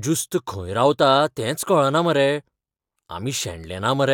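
There are no technical faults to describe in this clip, so there is nothing to place in time order.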